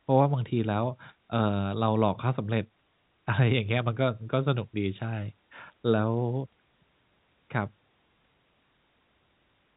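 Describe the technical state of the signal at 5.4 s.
At 5.4 s the speech is intact, with no dropout, click or distortion, only the usual narrow telephone band from the G.711 coding, which stops at about 3.8 kHz.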